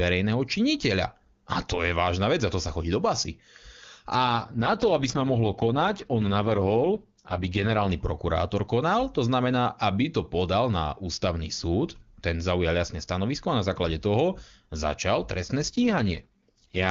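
From 4.15 to 7.89 s the speech turns rough and raspy, then clears before "prokurátor konal to znamená". This is an AMR rate drop. The wideband codec fell from its top rate to one that fits 6.6 kbit/s. The band stays intact. It recurs after "základe toho začal trestné", from 15.67 to 16.90 s.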